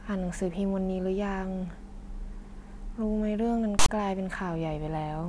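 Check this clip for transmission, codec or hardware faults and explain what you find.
One fault stands out. From 3.79 to 3.89 s, file tags are played as audio. Tag text read as samples gives a harsh, lopsided rasp, then zero padding drops abruptly to silence.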